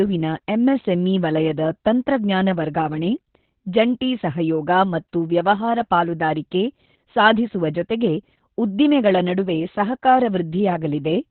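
Throughout, Opus voice compression leaves nothing above 4.2 kHz, a flat spectrogram ceiling. Coarse coding makes the speech muffled, hoarse and robotic, fitting narrowband SILK near 8 kbps.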